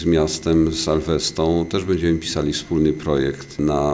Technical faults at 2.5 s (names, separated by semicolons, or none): none